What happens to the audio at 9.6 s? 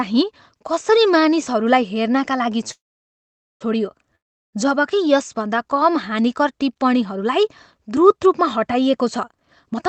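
From 9.30 s to the end at 9.88 s, a jitter buffer speed-up runs the speech at about 130% speed. The receiver trims repeated pitch-period slices, about a fifth of a second in total, to drain excess buffered audio, so it sounds hurried but, unlike a pitch shift, keeps its normal pitch.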